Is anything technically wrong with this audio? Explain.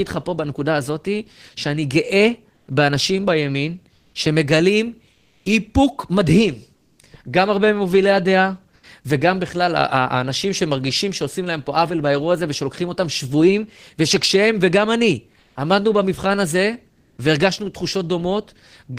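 Yes. Comfort noise in place of the background appears at 3.97–4.09, 5.11–5.41, 6.79–6.97, 15.43–15.55 and 16.99–17.17 s. The sender likely paused transmission in gaps between speech (discontinuous transmission, as in Opus DTX). The receiver filled each 120 to 300 ms gap with synthetic noise, a smoother noise of a different tone, about 4 to 8 dB quieter than the real background around it.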